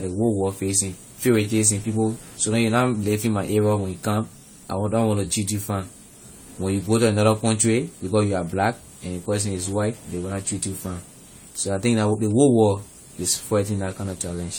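Throughout, the speech sounds swirly, smeared and hollow with blurred onsets, likely generation loss: repeated re-encoding, about four passes, consistent with AAC-LC at 64 kbit/s.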